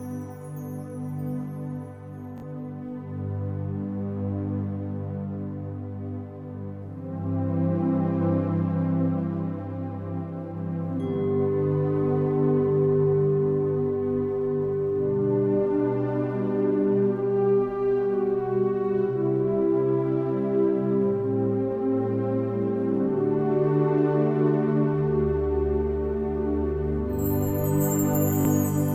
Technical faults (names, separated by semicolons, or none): Bluetooth stutter